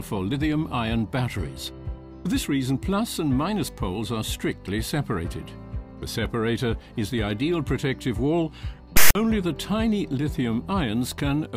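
The clip carries one fault: file tags played as audio, from 8.97 to 9.15 s. Metadata text is decoded as samples. This gives a loud, hard-edged rasp pushed off to one side. Zero padding then drops to silence. The burst lasts about 0.18 s.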